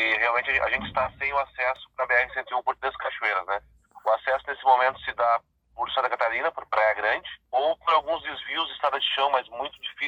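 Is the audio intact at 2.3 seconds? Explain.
Yes, the audio is intact at 2.3 seconds, with no dropout, click, distortion or other fault audible at that point.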